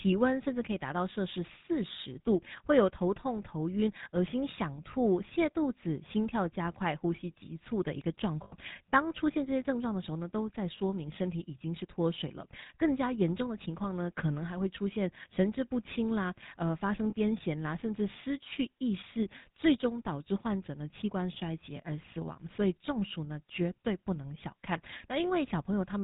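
This is a speech clip, and the whole of it has the buzzy, gravelly roughness of the GSM full-rate codec. Nothing comes through above 4 kHz. The vocal-tract model and its sparse pulse excitation cause plainly audible damage, which fits the 13 kbps full-rate GSM coder. There are two places with lost GSM frames. From 8.44 to 8.56 s, about 80 ms of sound is replaced by a repeat of the previous frame, held as a short metallic ring. A briefer ring of about 20 ms occurs between 17.10 and 17.14 s.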